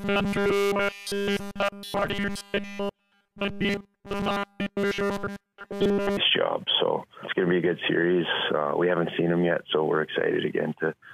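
From 0.01 to 6.17 s the sound turns into a rigid, metallic buzz pitched at 200 Hz, the robotic sound from repeated short buffers. Essentially all of that stretch is likely repeated material, a 5 ms fragment looped while fresh audio fails to arrive.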